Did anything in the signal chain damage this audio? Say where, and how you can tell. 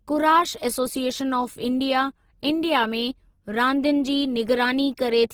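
Yes. Throughout the speech, tones sound grainy, rough and noisy instead of clean, while content still reaches about 20.2 kHz with few spectral holes. That points to the codec stage, likely Opus compression in its CELT music mode at a low rate around 16 kbps, filling starved bands with folded or noise energy.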